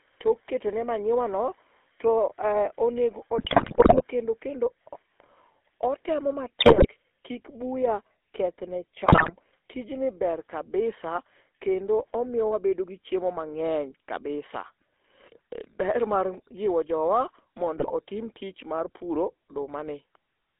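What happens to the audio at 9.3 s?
GSM bit errors hit from 9.06 to 9.32 s. Corrupted filter, pitch and gain values distort each frame, so the sound bursts into squawks, pops and gargling. Underneath, the GSM full-rate codec runs throughout. Its pulse-driven vocal-tract model gives a plainly audible buzzy, gravelly roughness, confined to about 300 Hz to 3.5 kHz.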